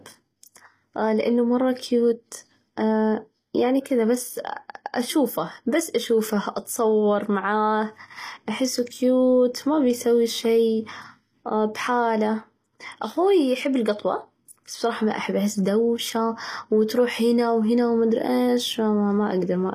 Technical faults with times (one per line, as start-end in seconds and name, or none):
0.00-19.75 HE-AAC compression